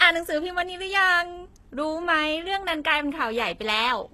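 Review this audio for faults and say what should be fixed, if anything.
HE-AAC compression throughout: treble above the lower band is rebuilt by copying lower bands upward, so sibilants turn gritty and lispy, with nothing above 12.3 kHz. This is likely a very low bitrate, around 16 kbps. Prevent it by encoding speech at a higher bitrate, or with plain AAC rather than band replication.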